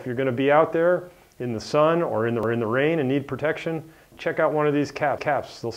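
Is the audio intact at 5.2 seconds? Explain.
No. From 5.18 to 5.43 s there are overlapping chunks: a 2.5 s block begins 250 ms before the previous one ended, so that quarter-second plays twice and stutters with a click at the join. The waveform shows an identical segment repeated back to back.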